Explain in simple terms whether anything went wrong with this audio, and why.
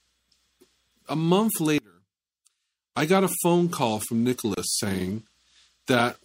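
Throughout the clip the sound has a watery, swirly quality, with thin, dull treble and smeared attacks. That is most likely MP3 compression at a low setting: the encoder ran short of bits, cut the high frequencies, and let weak detail flicker on and off.

From 1.78 to 2.96 s the sound suddenly drops to a faint remnant, then returns. This points to one channel inverted, likely because one stereo side's polarity was flipped. When the two sides are combined, everything they share cancels out, leaving only their small differences.

At 4.54 s there is a gap at a join of encoded pieces: a silence of about 30 ms cuts into continuous sound, then the audio resumes where it stopped. Separately encoded sections were joined without trimming the silent padding each encoder adds.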